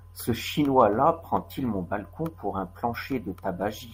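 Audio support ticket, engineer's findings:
No audible faults found.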